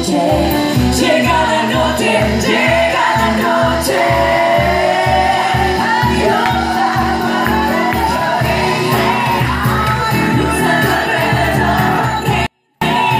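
A 24-bit alignment error hits the audio from 12.46 s to 12.81 s: samples packed into the low 24 bits of 32-bit words were read as full 32-bit integers, so for those 0.35 s the sound stays clean but falls by about 48 dB at once, leaving it barely audible.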